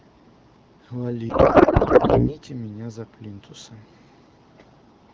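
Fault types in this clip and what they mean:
Codec payload misread, 1.29 to 2.37 s: speech turns into garbled warble and noise that barely follows it. This fits octet-aligned AMR frames being unpacked as bandwidth-efficient, which puts every field in the wrong place. AMR wideband speech returns once the packing agrees.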